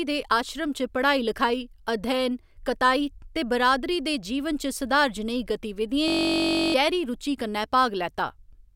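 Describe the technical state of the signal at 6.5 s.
At 6.5 s the speech is replaced by a system hang loop running from 6.08 to 6.74 s. The driver stalled while the sound hardware kept replaying one 21.33 ms slice of its ring buffer, which fits a 1024-sample buffer, about 31 times. At 46.9 Hz that exact repetition fuses into a steady, pitched buzz rather than a stutter or silent dropout, and about 0.7 s of real audio never arrives.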